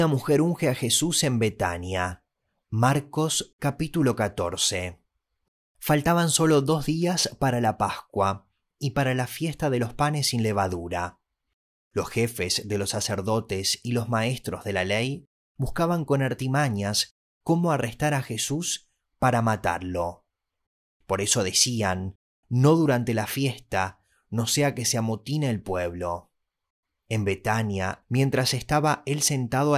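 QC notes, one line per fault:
No technical faults were heard anywhere in the speech recording.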